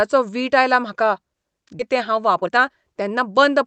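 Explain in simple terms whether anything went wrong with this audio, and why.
Two things went wrong, both in how the call system handled the timing of the audio.

At about 1.79 s there is a skip ahead. Roughly 0.7 seconds of speech never reached playback, either lost in transit or thrown away because the receiving buffer was overfull while newer audio was already waiting. Nothing was inserted to cover the hole, so the speech jumps straight from before the gap to after it, and that stretch is simply absent.

From about 1.89 s to 3.65 s there is a jitter buffer speed-up. The receiver was holding more audio than it wanted, so it repeatedly cut out tiny slices, each one or a few vocal cycles long, to catch up, removing around 0.3 seconds in total. The result is speech running at about 114% of normal speed with its pitch unchanged, so it sounds rushed rather than higher. Throughout, the call codec limits the sound to frequencies below about 8 kHz.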